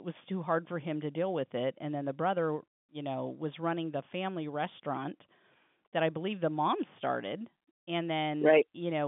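No faults can be heard.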